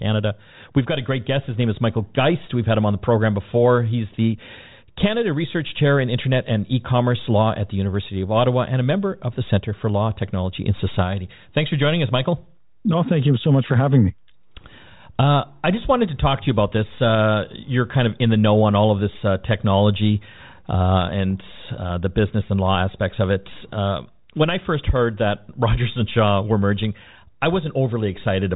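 Nothing in this recording stood out as a technical fault on listening.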